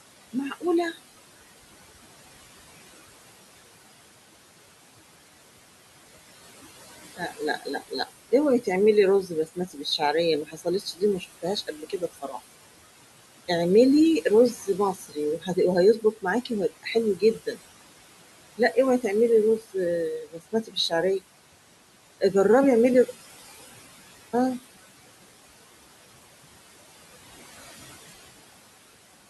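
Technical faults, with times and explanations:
Throughout: noise suppressor artifacts. The room noise, which sits about 17 dB below the speech, is pulled down by about 17 dB in the gaps between phrases and swells back up beneath the speech, so the background pumps. On a spectrogram the pauses show a patchy, speckled floor of isolated time-frequency blobs instead of an even noise band. On the waveform the noise floor visibly dips whenever the speech stops.
7.17–7.92 s, 9.27–10.01 s, 10.46–12.34 s, 14.55–15.57 s, 16.02–17.57 s and 20.24–21.21 s: speech cut by the noise suppressor. In each span the suppressor mistakes quiet parts of the speech for background and turns them down with it, by about 12 to 16 dB at worst, so endings and soft consonants sound swallowed. The affected portions run from a tenth of a second to most of a second. On a spectrogram they appear as gaps or darkened patches, and on the waveform as abrupt dips in the envelope.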